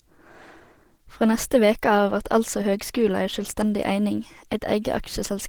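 The speech has most likely passed through Opus compression at a low rate, which fits an encoder in its hybrid speech mode near 16 kbps, so the damage is plainly audible throughout: the audio sounds muffled and hoarse, even though content still reaches about 20.3 kHz.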